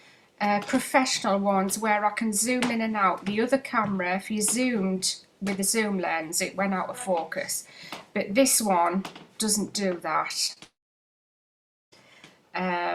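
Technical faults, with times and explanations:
10.47–10.51 s and 10.53–10.58 s, short concealed packet loss: two brief gaps, about 20 ms and then 40 ms of audio, never arrived in time. The decoder filled each by extending the preceding sound and then crossfading back into real audio. This produces a quick smear or wobble rather than a clean gap. On a spectrogram, harmonics or noise bands run flat and slightly blurred across each patch, and the waveform shows no break.
10.64–11.94 s, long network dropout: audio stops arriving for about 1.3 seconds, most likely because the network delivered nothing during that stretch. The receiver briefly continues the last sound as a fading buzz or hiss, then leaves about 1.2 s of near-silence before normal sound resumes with that portion missing. A waveform shows a short decaying tail followed by a flat line. The spectrogram shows smeared, fading bands and then an empty block.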